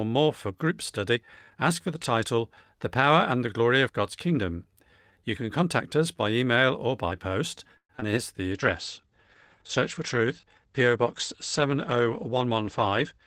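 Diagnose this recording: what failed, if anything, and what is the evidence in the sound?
The network stage failed first, with repeated packet loss (robotic sound) from 7.77 to 8.15 s, just after "email or by post". Four short holes break the speech, the longest about 119 ms. Each is patched by extending the last sound, so roughly 40% of that stretch is concealment, which gives a choppy texture. Unlike a bitrate drop, the damage comes as distinct gaps and repeats, not as steady coarseness.

A call bitrate drop follows at 8.54 s and lasts to the end of the clip. The encoder falls from 32 to 12 kbps, and the coded bandwidth shrinks from 20 kHz to 8 kHz, so the speech turns muffled and watery with the top end gone. This is the codec responding to a lowered bandwidth estimate. It differs from packet loss because the degradation is continuous and even, with no holes or repeated fragments.

A jitter buffer speed-up runs from 12.09 to 13.14 s. 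The receiver had accumulated excess delay and trimmed it by cutting out short pitch-period slices, around 70 ms in total. The speech plays about 6% fast and sounds slightly hurried, but its pitch stays put. That unchanged pitch is what separates it from a sample-rate mismatch, which would raise pitch and tempo together. It also differs from the bitrate drop that overlaps it, because it changes timing rather than tone.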